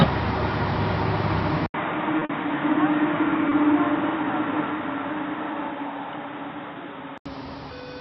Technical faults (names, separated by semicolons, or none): input switched to a poorer device; short concealed packet loss